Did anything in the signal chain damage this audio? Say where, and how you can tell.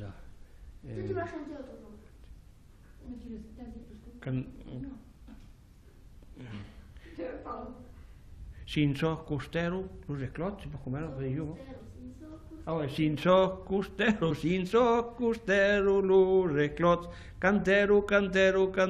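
Yes. Compressed frames skipped at 11.74 to 11.81 s, at the codec stage. The audio jumps forward by about 70 ms, as if a short slice were simply lifted out. That jump is the giveaway: whole compressed frames never reached the output, either missing from the stream or rejected by the decoder as damaged.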